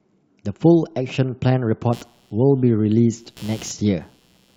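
From 1.93 s to the end of the speech, computer activity noise appears: processor or peripheral load shifts the shared audio ground, adding a buzzing chirp pulsing around 150 Hz, about 30 dB below the speech. On a spectrogram it shows as evenly spaced vertical striations that ignore the speech.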